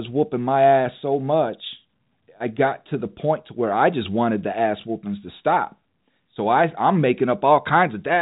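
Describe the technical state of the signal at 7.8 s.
At 7.8 s the audio is intact with no fault, the sound carried through ordinary G.711 telephone coding that leaves nothing above about 3.8 kHz.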